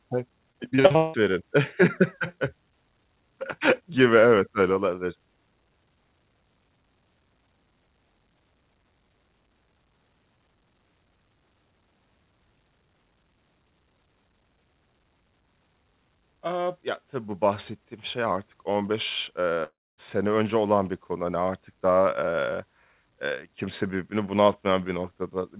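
From 0.52 to 1.16 s the speech breaks up with repeated packet loss, giving a robotic sound. Audio keeps dropping out in quick succession, and each hole is filled by stretching the last received sound, so about half of this 0.64 s span is synthetic fill rather than real signal. The longest single gap is about 175 ms. The result is choppy and robotic, with fragments of speech missing between the repeated bits.

At 19.64 to 20.00 s there is a break of about 340 ms, likely a long network dropout. The receiver first carries the last sound forward as a buzz or hiss that fades. Then silence follows for roughly a quarter of a second before speech returns at "önce olan bir konu", with the lost portion simply gone. Across the whole call, nothing is heard above 4 kHz, which fits a narrowband G.711 telephone path.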